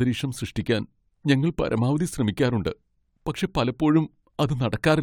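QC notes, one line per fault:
No fault found.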